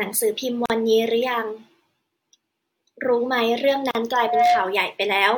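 Twice in this speech recording the sound drops out abruptly into short silences and then resumes exactly where it left off: from 0.66 to 0.70 s (about 42 ms) and from 3.91 to 3.95 s (about 40 ms). Each has smeared edges. These are gaps at a join of encoded pieces. The audio was encoded in separate sections and spliced without trimming, so each join keeps one run's padded final frame and the next run's start-up delay as dead air.

From 4.12 to 4.82 s a steady tone at 716 Hz rises out of the speech over roughly a third of a second and becomes a squeal that ends up a few decibels louder than the voice. This is loudspeaker feedback squeal. A microphone was picking up the speaker it fed, and at 716 Hz the loop gain exceeded one, so that frequency kept reinforcing itself.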